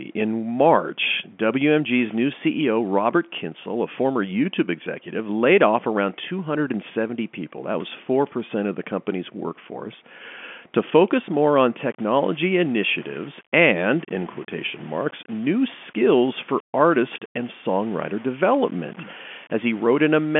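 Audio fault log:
11.85–20.39 s, low bit depth without dither: after "to focus more on" the speech turns grainy and gritty. The distortion follows its level at about 25 dB beneath it, and quiet tails drop to silence or sputter between steps, likely from rounding to 7 bits with no dither added.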